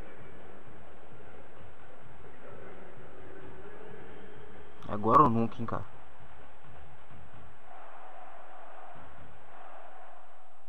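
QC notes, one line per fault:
No technical faults are audible in the audio; the signal stays steady and continuous, with nothing that needs flagging.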